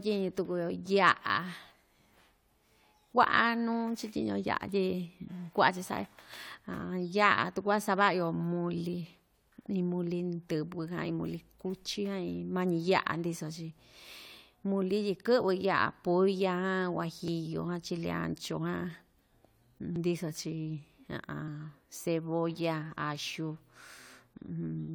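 The recording path most likely fell behind at two points, so the hardware overwrote samples before they were collected. This dropped buffer (overrun) joins the audio on either side directly, with no gap of silence. At 17.28 s about 40 ms is skipped, heard as a small jump forward in the speech. At 19.96 s a larger piece, around 70 ms, goes missing, giving a longer skip.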